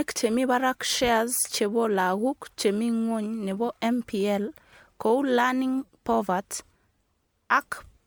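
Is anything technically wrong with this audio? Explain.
Yes. Throughout, the speech sounds swirly, smeared and hollow, with blurred attacks: generation loss, likely from MP3 re-encoding around seven times, with each pass stacking new quantisation noise.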